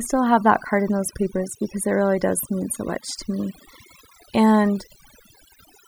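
Overdone noise removal runs through the whole clip, from start to finish. A noise reduction stage was pushed too hard on a noisy recording, so any frequency band sitting close to its estimate of the noise floor is pulled far down or shut off entirely. Quieter parts of the speech fall below that line and are removed along with the noise. The gaps drop to near silence scattered with twinkling specks.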